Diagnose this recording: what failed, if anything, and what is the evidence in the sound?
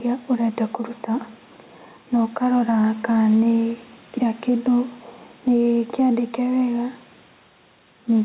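Gain set far too high at the microphone, likely clamped by a fast limiter in call processing, causes gain pumping throughout. The gain swings by around 5 dB under loud sounds, leaving the speech squashed and flattened in level.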